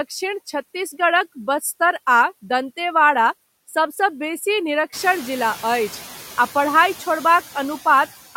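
Speech clip with noise suppressor artifacts throughout: a suppressor pulls down each band it judges to be steady noise, cutting the background by about 12 dB. The room noise therefore dips in the gaps and swells back under each phrase. The effect is more exposed after the room noise itself climbs by about 13 dB at roughly 5 s, to about 18 dB below the speech.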